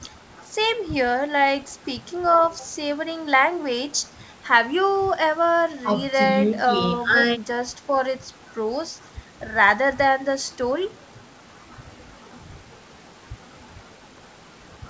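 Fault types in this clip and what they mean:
Nothing stood out on listening to this speech clip.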